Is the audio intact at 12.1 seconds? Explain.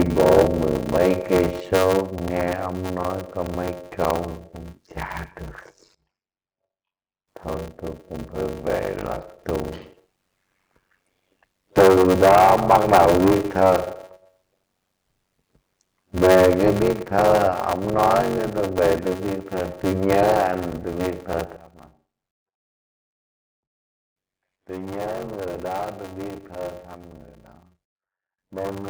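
No. A block size mismatch (padded) runs through the whole clip, including 12.1 seconds. One stage writes shorter blocks than the next reads, which fits a 512-sample read, and zeros fill each remainder. The gaps buzz at 93.8 Hz, and the audio runs at 0.625 speed with its timbre kept.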